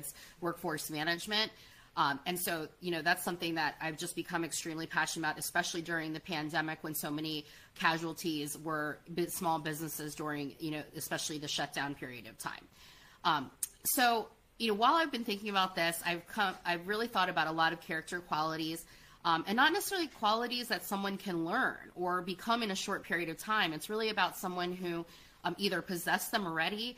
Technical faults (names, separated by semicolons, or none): none